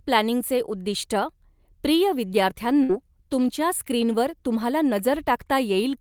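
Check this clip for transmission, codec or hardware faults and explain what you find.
There is one transmission fault: a burst of packet loss from 2.83 to 2.92 s. Several consecutive packets never arrived in time, so the receiver stretched the last received sound for about 56 ms while fading it down, and about 60 ms of speech is simply gone. On a spectrogram the frequency content freezes into flat, dimming horizontal bands, then the speech resumes abruptly. On the waveform a decaying, repetitive stretch ends in an abrupt jump.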